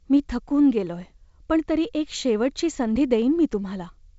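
Nothing stood out on listening to this speech, which comes through G.722 wideband telephone coding at 56 kbit/s with no content above about 7.7 kHz.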